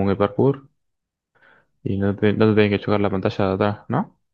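No technical faults are audible.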